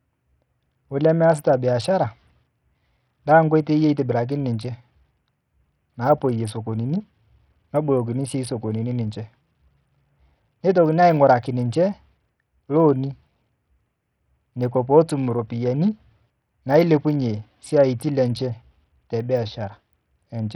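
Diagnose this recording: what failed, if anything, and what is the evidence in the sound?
The codec stage failed. Throughout the speech, the treble flickers in and out under a gritty, aliased haze, which points to a very low bitrate of around 64 kbps. The likely cause is Bluetooth SBC compression starving its upper sub-bands of bits. A spectrogram would show blinking, ragged high bands.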